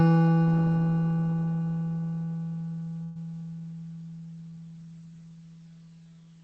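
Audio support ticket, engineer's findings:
Burst of packet loss, 3.03–3.17 s: consecutive packets dropped or late in the call path's jitter buffer; concealment stretches the last sound over 120 ms, fading, then resumes past a 120 ms skip. Band-limited to 8 kHz.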